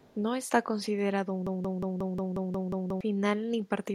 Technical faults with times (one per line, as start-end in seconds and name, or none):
0.00-0.16 echo leak
1.47-3.01 broken-record loop